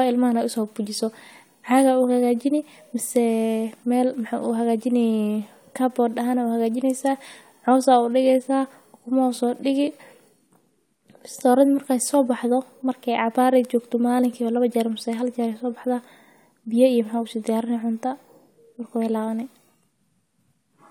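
No audible technical faults.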